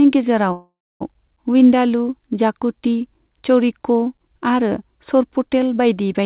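From 0.52 to 1.03 s there is a call audio freeze: the last sound smears into a fading buzz or hiss, then about 290 ms of silence, likely from late packets draining the jitter buffer. Unlike a dropout, the speech resumes where it stopped with nothing lost. The audio runs later afterward and is cut off at 4 kHz, which fits a narrowband G.711 call.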